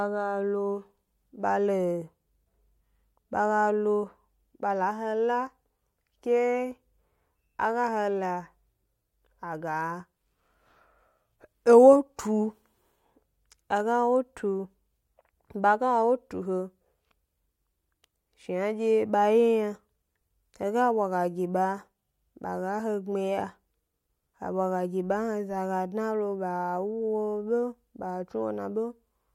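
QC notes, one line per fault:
No faults heard anywhere in this speech recording.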